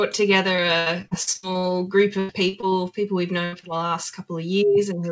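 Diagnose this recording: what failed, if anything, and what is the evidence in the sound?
Repeated packet loss (robotic sound) occurs from 0.56 to 1.65 s and again from 2.19 to 2.75 s, a network fault in the call path. The first stretch has nine separate holes, the longest 60 ms, with about 320 ms of real audio missing and roughly 29 percent of the span patched over. The second has four holes, the longest 96 ms, with 180 ms missing and about 31 percent patched. Each time, the receiver extends the last sound to cover the hole, and the next hole arrives before the sound settles. That produces the choppy texture with pieces missing.

A burst of packet loss hits at 3.45 to 3.54 s, again at the network stage. About 80 ms of audio failed to arrive in time. The decoder kept the preceding sound going and let it decay across the gap, so the audio holds and fades rather than cutting to silence. It then resumes further along, and the material that fell in between is simply gone.

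Short concealed packet loss follows at 3.60 to 3.65 s, once more a network fault. Roughly 20 ms went missing, and the receiver filled it by continuing the last sound before crossfading back into real audio. The result is a brief smear or wobble. All of this travels over a G.722 call codec, whose band limit leaves nothing above 8 kHz.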